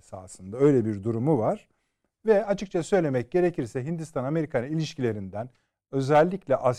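No technical faults can be heard in the recording. The speech runs for about 6.8 seconds without any technical interruption.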